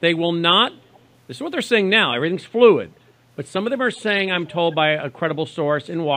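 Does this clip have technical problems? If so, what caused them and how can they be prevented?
Yes: there's an echo leak. Faint copies of the speech come back about 0.38 s late at 0.93–1.0 s, 3.96–4.0 s and 4.45–4.5 s, likely from a speakerphone whose echo canceller let some of its own playback through. Better echo cancellation at the far end, or a headset instead of the loudspeaker, would prevent it.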